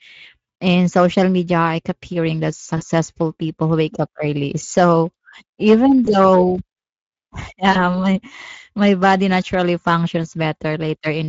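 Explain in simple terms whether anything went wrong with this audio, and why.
The whole speech clip has a rough, hoarse, noisy quality, with the upper sparkle of the sound replaced by a thin hiss. That is the Speex codec at work. Speex is an older speech compressor from internet calling and game chat. It rebuilds the sound from a simplified model of the throat and mouth. At the setting used here it keeps too little detail of the underlying buzz, so the sound comes back grainy and somewhat artificial.

At three moments the sound briefly smears into a short buzzy or blurred patch and then takes a moment to recover: around 2.77 to 2.83 seconds, 6.05 to 6.10 seconds, and 7.71 to 7.77 seconds. This is VoIP packet loss concealed by the speech codec. Small chunks of the call went missing in transit, about 40 ms at the first and third spots and about 20 ms at the second. The decoder filled each gap by stretching the last sound it had heard.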